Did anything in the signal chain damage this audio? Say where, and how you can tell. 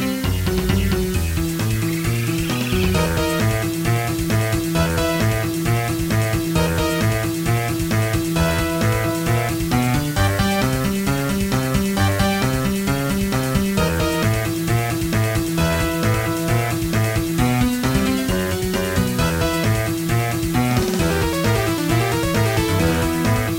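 Yes. Low bit depth with dither runs through the whole clip. It was introduced at a sample-format conversion stage, where the audio was requantised to roughly 5 bits with dither added before rounding. The evidence is a constant, even hiss sitting only about 15 dB below the signal, with no gritty distortion tracking the sound's level. The dither decorrelates the rounding error from the signal, so the coarse quantisation is heard as steady white noise instead of harmonic distortion.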